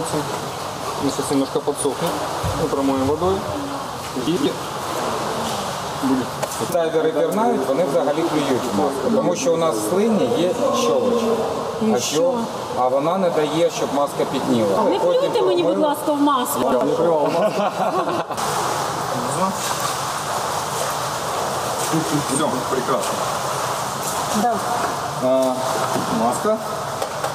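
The audio has chunks out of order at three points: 4.27 to 4.46 s, 16.63 to 16.81 s and 21.46 to 21.64 s. Each span covers two blocks of about 93 ms. In each, one block plays one place late, after the block that should follow it. No audio is missing. The order is swapped, so each moment sounds jumbled. Every swap leaves three hard joins where unrelated audio meets.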